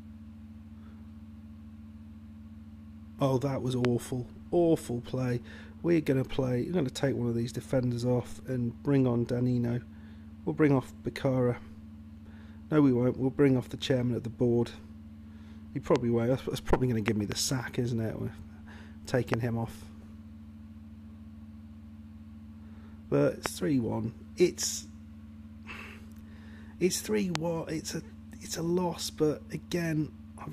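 Loud pops at 3.85, 15.96, 17.08 to 17.34 (two in succession), 19.34, 23.46 and 27.35 s: sharp transients about 20 to 25 dB above the sound, likely from electrical voltage steps.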